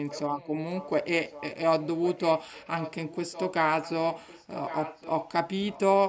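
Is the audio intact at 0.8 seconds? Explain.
No, at 0.8 seconds you're inside an echo leak running from 0.75 to 1.06 s. A faint, delayed copy of the speech, around 20 dB down and about 1.1 s late, comes back, likely from a loudspeaker whose pickup the echo canceller didn't fully remove.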